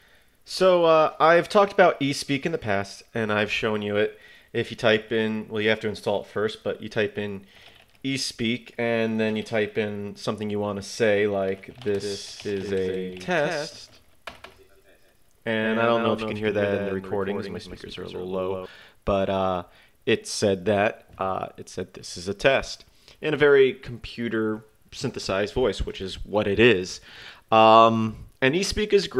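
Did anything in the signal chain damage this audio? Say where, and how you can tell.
Yes. From 12.0 s to 18.66 s everything is heard twice: a second copy trails the first by roughly 150 ms, about 5 dB quieter. It is full-band, with no decay or room colour, and it switches in and out abruptly at those times. This is a doubled audio track, not an echo. The cause is likely a second capture path, such as a monitoring loopback at the driver or buffer stage, or an edit that left two copies out of step.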